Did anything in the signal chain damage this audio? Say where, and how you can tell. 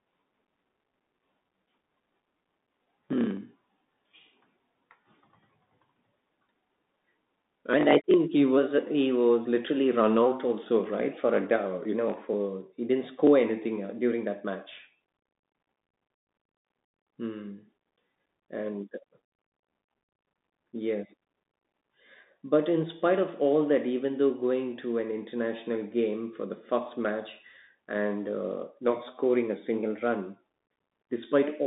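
Yes, at the codec stage: a Bluetooth CVSD headset codec throughout. A spectrogram shows nothing above 3.8 kHz. Its one-bit slope tracking leaves scratchy sibilants and granular hiss.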